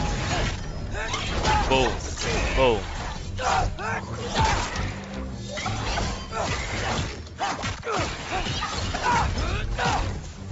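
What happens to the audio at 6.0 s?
At 6.0 s the audio is intact, with no audible fault at that moment.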